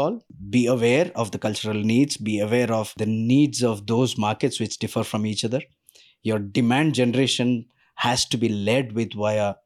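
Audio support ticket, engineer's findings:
No audible faults found in speech recording; no action required.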